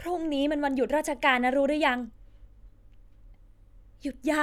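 No technical faults are audible anywhere in the speech.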